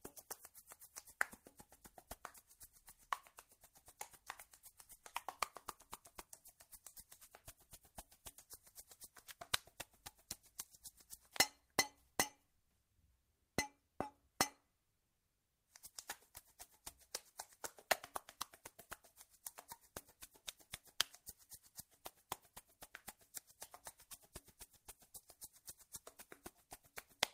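No technical faults can be heard anywhere in this recording.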